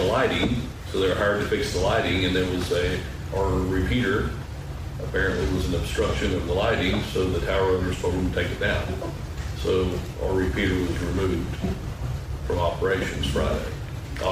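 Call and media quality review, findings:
No audible faults found in this recording.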